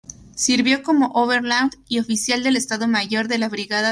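No technical faults can be heard anywhere in the clip, so there is nothing to describe in time order.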